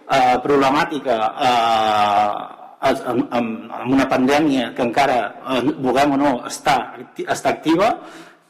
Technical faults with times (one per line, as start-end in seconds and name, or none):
none